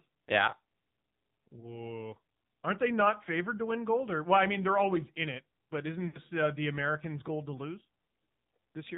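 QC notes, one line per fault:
throughout, AMR narrowband mobile codec: the speech is cut off above 4 kHz and carries a buzzy, synthetic edge, plainly audible at 7.4 kbps. The vocal-tract model is driven by only a few pulses per subframe, which separates this from a clean telephone band-limit.
1.60–1.85 s and 6.08–6.20 s, lost AMR speech frames: the decoder repeats its last good pitch and vocal-tract settings at falling gain, so the speech smears and sags instead of dropping to silence. The first event is a brief warble that fits a single 20 ms frame. The second, between "in it but isn't" and "uh the", is longer and fits about three frames.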